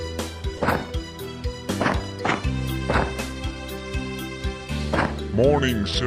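Corrupt frame decoded at 0.56 to 0.67 s and again near 2.68 s: damaged compressed frames were played anyway, so misread gains put energy at wrong frequencies, giving short noisy blips peaking around -25 dBFS, the first spanning what sounds like several frames.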